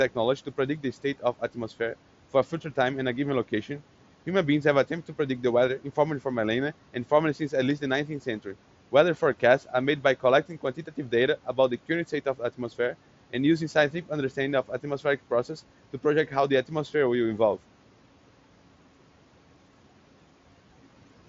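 From 10.49 to 11.12 s, stretches of speech sound swallowed, dipping about 9 dB. This is speech cut by the noise suppressor, mistaking them for background.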